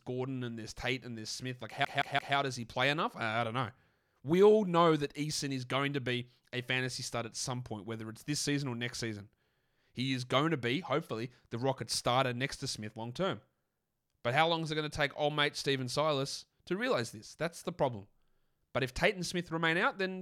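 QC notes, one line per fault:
1.85–2.36 s, CD stuck on one turn: a 170 ms slice stutters three times with brief mutes before "does he play enough"; the laser keeps jumping back one track.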